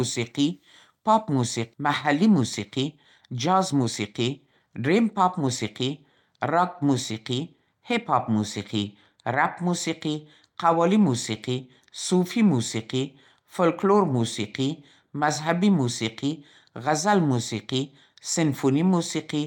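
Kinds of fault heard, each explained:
Skip ahead: at 1.73 s about seven tenths of a second of speech is dropped, and playback jumps forward with no gap where the two sides join.
Jitter buffer speed-up: from 1.83 to 3.87 s and 4.28 to 6.23 s, pitch-period trimming runs speech 5% and 7% faster at unchanged pitch, sounding hurried.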